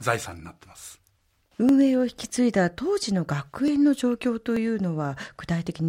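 Four isolated clicks cut through the speech, at 1.69 s, 2.56 s, 3.68 s and 4.57 s, each the likely result of dropped samples: a fraction of a millisecond of the stream goes missing, so the waveform leaps abruptly from one value to a later one. Nothing audible is lost, but each leap sounds as a single sharp tick. On a waveform it shows as a sudden step; on a spectrogram, as a thin vertical line spanning all frequencies.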